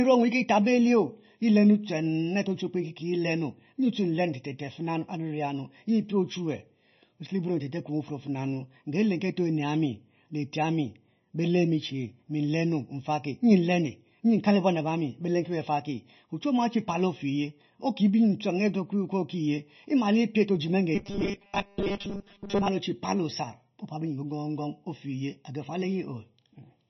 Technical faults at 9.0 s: channel delay (comb filtering); MP3 compression

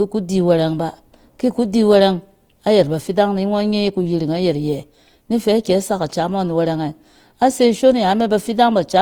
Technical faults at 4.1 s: Opus compression

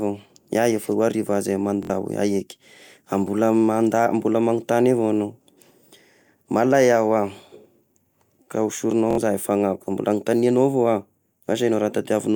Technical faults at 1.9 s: Bluetooth stutter

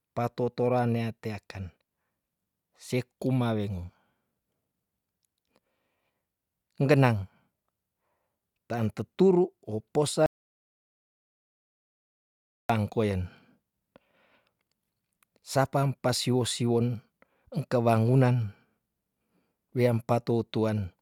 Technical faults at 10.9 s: audio dropout to silence

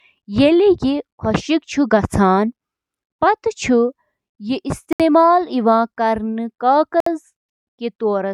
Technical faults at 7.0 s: Bluetooth stall

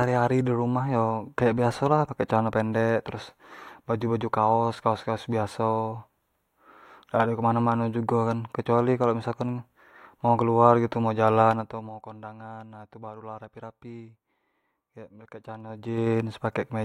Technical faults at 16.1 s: zipper noise

